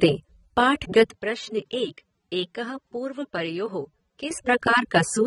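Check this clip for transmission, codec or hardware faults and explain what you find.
Two faults stand out in this speech: codec damage across the whole clip, and a stretch where the sound turns poorer before recovering.

Throughout, the speech sounds dull and smeared, with a warbling, fizzy edge on sibilants and nothing above 11 kHz. The likely cause is AAC compression: AAC-LC quantising its frequency lines coarsely and lowering the cut-off, which fits a bitrate near 24 kbps.

From 1.14 s to 4.31 s the speech drops in level by around 10 dB, turns boxier and narrower with nothing above 9.3 kHz, and gains a faint new noise floor well below the speech. It then clears again, with no gap at either change. This points to an input switched to a poorer device.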